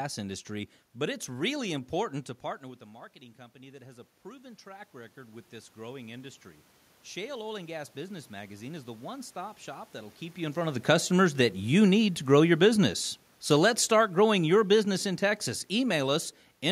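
From 3.52 to 6.46 s, just after "partner with a marketing", automatic gain rising follows a drop of about 16 dB in the input. The gain climbs about 7 dB over roughly three seconds, so speech and room noise swell together. A second rise of about 4 dB runs from 7.17 to 10.22 s, ending before "you in front of". A talker moving changes only the voice level, while the background stays put.

Automatic gain falling then pulls the level down about 4 dB from 10.75 to 12.92 s, just after "you in front of", and about 5 dB from 13.49 to 16.26 s. Voice and background sink together over two to three seconds rather than the voice alone fading.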